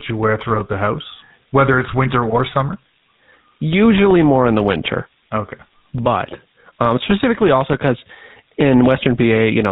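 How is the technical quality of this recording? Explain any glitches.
The recording quality is poor. Three faults are audible: a steady high whistle, plain low-rate codec coloring throughout, and one short corrupted burst.

Switching supply whistle: A thin, high tone sits under the speech from start to finish. It wanders between about 4.7 kHz and 5.5 kHz, centered near 5 kHz, roughly 25 dB below the speech. This fits a nearby switching power supply running in an audible burst mode, whose switching rate shifts with load. That shifting load is what makes the pitch drift instead of holding still.

GSM full-rate codec: The speech has a buzzy, gravelly texture throughout, and the top end is gone. Nothing of the voice survives above 4 kHz. The sound matches the original GSM full-rate codec at 13 kbps. That codec models the vocal tract with a filter and excites it with a coarse, decimated pulse train, so fine harmonic detail is replaced by rasping roughness.

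GSM bit errors: From 2.30 to 2.40 s the speech breaks into a brief squawk and gargle. This is consistent with roughly five consecutive 20 ms frames decoded from corrupted data, as on a weak radio link. Flipped bits in the filter, pitch and gain parameters make the decoder rebuild the wrong spectrum and loudness for those frames. The result is a momentary distorted burst before normal decoding resumes.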